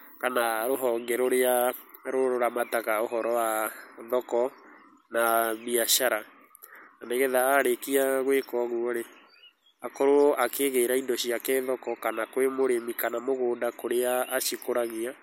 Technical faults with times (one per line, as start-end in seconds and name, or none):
none